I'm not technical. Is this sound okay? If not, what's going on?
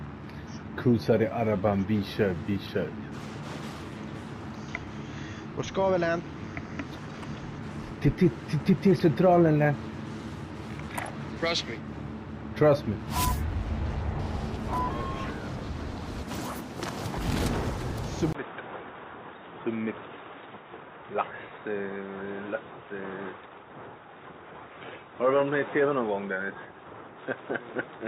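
No. From 18.33 s to the end, the sound turns dull, a bit quieter and picks up a different background hiss after a brief gap, likely an input switched to a poorer device.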